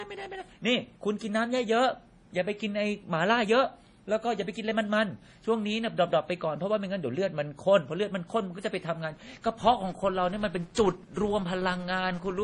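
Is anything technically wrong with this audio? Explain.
Yes, there are two faults. Throughout the speech, nothing reaches above 10.5 kHz, and the sound is dull. This is likely low-bitrate MP3 audio saved at a high bitrate: the coarse first encoding's damage survives. On a spectrogram there is a flat ceiling at 10.5 kHz.

From 9.13 s to the end there is a filter restarted on every block. Each block starts from silence, giving a level-following buzz at 172 Hz, which fits 256-sample blocks. It shows as regular transients in the waveform and evenly spaced vertical lines on a spectrogram.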